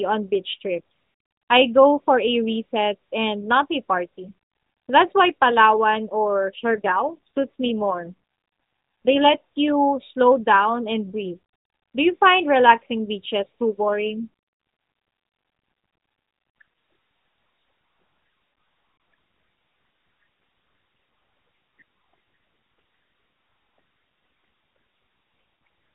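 From 6.60 to 9.35 s, just before "you slow down and", and again from 13.74 to 16.62 s, after "find relaxing beaches too", an AMR rate drop makes the speech rougher and buzzier, which fits the codec falling from 12.2 to 5.9 kbps. On a spectrogram the 4 kHz band and waveform stay continuous, but the harmonics smear.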